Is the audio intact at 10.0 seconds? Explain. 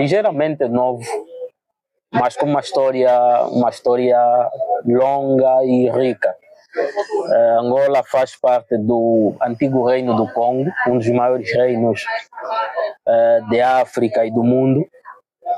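No. From 9.14 to 11.73 s, linear timecode running at 24 frames per second leaks into the audio path from a neighbouring track or cable. That code is a square wave that flips between two frequencies, near 1 kHz and 2 kHz, as it encodes each bit. It sits very low, roughly 45 dB below the sound, but at 10.0 s it is audible as a faint, steady chirping warble behind everything.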